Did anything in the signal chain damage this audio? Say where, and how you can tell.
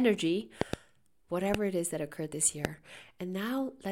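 Yes, there are loud pops, most likely from a voltage spike in the analogue wiring. There's a double pop at 0.61–0.76 s, single ones at 1.54–1.57 s just before "it is that occurred" and 2.65–2.67 s right after "is that occurred this", each spiking about 20 dB over the speech, which carries on underneath.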